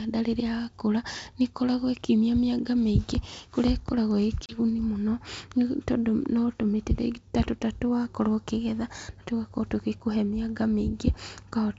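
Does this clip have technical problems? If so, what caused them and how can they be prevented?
Yes. Packet loss on an ADPCM call occurs at 4.46 to 4.59 s, just after "mĩingĩ kũrĩa ĩkoragwo ĩ". About 30 ms, roughly three packets, becomes silence. The decoder's predictor then briefly mistracks. Forward error correction or packet loss concealment with a decoder state reset would prevent it.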